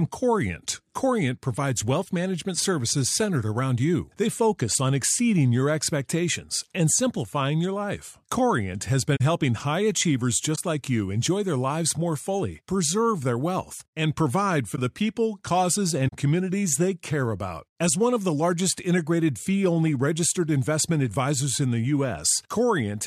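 Corrupt frame concealed at 9.16–9.21 s (after "has been"), 10.54–10.58 s, 14.75–14.79 s and 16.07–16.14 s. The decoder detected damaged AAC frames and covered each one itself.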